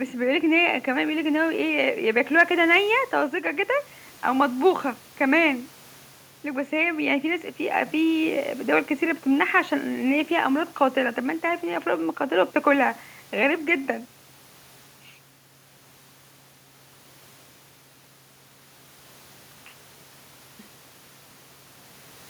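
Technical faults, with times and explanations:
The speech signal carries no audible technical fault at any point.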